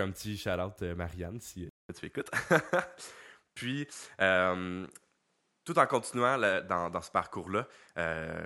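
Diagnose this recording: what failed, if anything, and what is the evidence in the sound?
At 1.69 s the speech breaks for 200 ms, then continues about 5 dB different in level, with nothing above 11.5 kHz and a new noise floor roughly 50 dB down. This points to the driver stage, likely an input switched to a poorer device. A codec bandwidth drop would not bring a gap and fresh noise.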